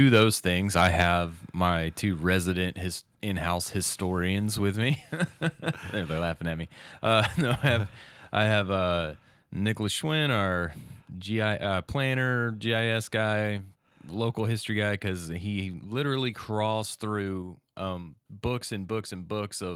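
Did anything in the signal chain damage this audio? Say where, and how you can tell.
Yes. At the converter stage there is microphone overload, likely from input gain set too high. From 0.78 to 1.02 s, just after "those things", peaks overshoot the converter's ceiling by about 5 dB. Their tops are flattened on under one percent of samples, giving the loudest syllables a harsh, crackling edge.

In call processing, the microphone volume was stepped down, likely as an automatic reaction to that clipping. At 1.02 s the whole level, speech and background together, drops by about 3 dB in a single step rather than a gradual fade, which shows a one-off input gain adjustment.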